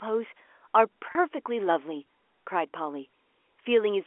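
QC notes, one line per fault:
1.12–1.15 s, packet loss with pitch repetition: 30 ms of audio went missing, which fits three 10 ms packets. The receiver repeated the last pitch period, so the sound holds briefly with a slight buzz instead of breaking into silence or a click.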